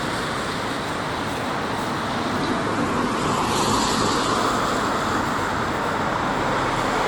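From 2.39 s to 4.39 s the audio drops to a lower bitrate on the adaptive stream: with no gap, the top end cuts off above 12.2 kHz and codec artefacts thicken, consistent with a fall from around 64 to 12 kbit/s. Unlike packet loss, nothing goes missing.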